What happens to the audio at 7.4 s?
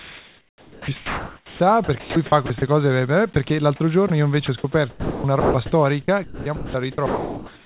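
From 7.06 s to the end, speech gives way to steady comfort noise, likely sound dropped by the voice detector, which treated about 0.3 s of speech as background and stopped sending.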